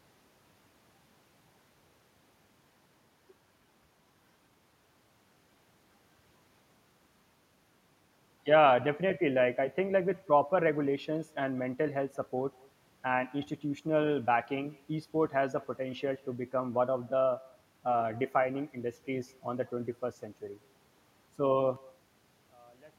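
From the very start, every phrase trails a faint copy of itself, and that's echo with no canceller. The far end is playing the call through a loudspeaker, its mic catches that playback, and nothing strips it out, so the speech returns after the round trip, around a fifth of a second late. It sits about 27 dB under the direct speech, so it's a quiet, thin shadow behind each phrase, all the way through.

Then at 21.76 s, right to the end at 22.98 s, the speech suddenly drops by about 29 dB and almost disappears. What's left is a weak, faint trace rather than the full sound. The likely cause is one channel inverted: with one side's polarity flipped, the material common to both channels cancels when they're folded to mono, and only the small difference between them gets through.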